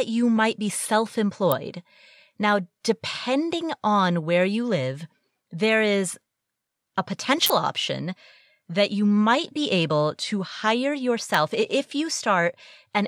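Speech carrying three electrical switching spikes: sharp snaps at 1.52 s, a short cluster from 7.46 to 7.50 s just before "option that you might", and 11.34 s after "be able to hire", peaking roughly -5 to 0 dBFS. They sit on top of the sound without interrupting it, unlike dropout clicks, so a nearby switch or motor arcing is the likely cause.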